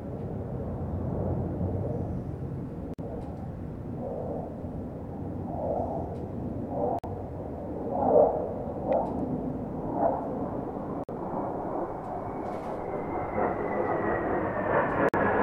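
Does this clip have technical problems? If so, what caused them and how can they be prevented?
Yes. A gap between chunks interrupts the audio with hard-edged 50 ms silences at 2.94, 6.99, 11.04 and 15.09 s, every 4 seconds. Nothing is lost, but each join is delayed by padded or late-starting chunks. A spectrogram shows thin blank vertical stripes, and the waveform drops to near silence. Prevent it by trimming codec padding and queuing each chunk before the previous one ends.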